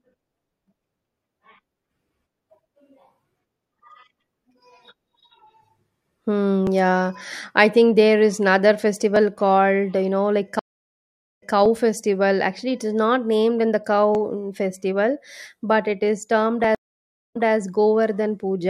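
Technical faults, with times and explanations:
6.67, 9.16, 11.66, 14.15 and 16.64 s, audio missing between chunks: the recording was likely processed in 2.5 s blocks, and a few milliseconds went missing at each handover before the two sides were butted together. Each seam is a tiny skip in the speech, evenly spaced, including one between "not named in the" and "mm festival but it" and another right after "but it is termed".
10.59 to 11.54 s and 16.75 to 17.56 s, stream reconnect: the connection dropped twice, the player fell silent for 744 ms and then 522 ms, reconnected, and started a fresh decoder. On resuming, the server resent a short burst, so playback picks up 209 ms and 287 ms earlier than where it stopped and repeats that stretch. The second dropout comes just after "but it is termed".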